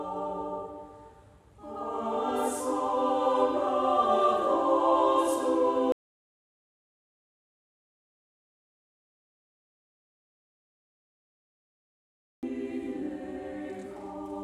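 At 5.92 s the sound just stops dead, and nothing comes back until 12.43 s, so about 6.5 s is gone. That's an audio dropout to silence: the gap is silent, with no room tone or hiss underneath. The likely culprit is the input going away for a while, maybe a loose connection or a stray mute, while the recorder kept writing blanks. Whatever happened in that stretch is simply lost.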